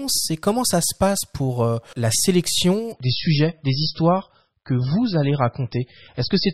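At 2.92 s the adaptive stream switches to a lower bitrate and stays there to the end, with no gap. The treble vanishes above 5.6 kHz and smearing artefacts rise, consistent with a fall from 128 to 16 kbit/s MP3. A spectrogram shows a sudden flat ceiling; the waveform stays continuous.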